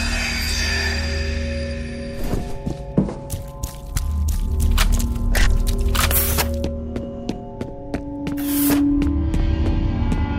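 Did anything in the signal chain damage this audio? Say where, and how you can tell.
No, nothing along the chain left a mark I can hear: no stage from the wiring through to playback seems to have touched this audio.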